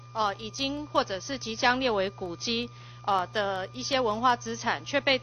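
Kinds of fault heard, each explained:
No technical fault can be heard anywhere in the audio. Nothing in it calls for a fault line here.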